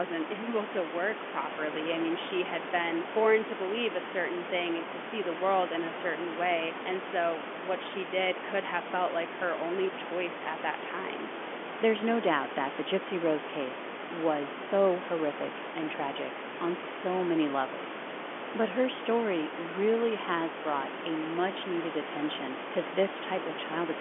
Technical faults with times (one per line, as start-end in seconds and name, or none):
none